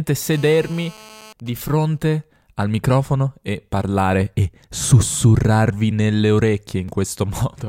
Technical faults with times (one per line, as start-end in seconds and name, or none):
0.33-1.33 GSM phone buzz
1.40-2.43 GSM signalling bursts
5.91 block of digital silence
6.88 block of digital silence